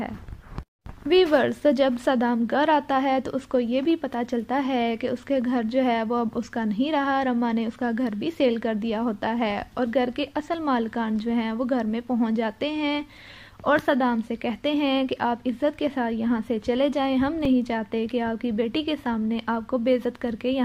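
An underrun with held sample occurs at 17.45 s. The output buffer briefly ran dry, and the converter kept outputting its last value for about 2.1 ms until fresh data arrived. The waveform freezes flat at that level, so the sound halts without a sharp edge, then resumes with roughly two milliseconds of incoming audio skipped. The jump back to live material causes the discontinuity.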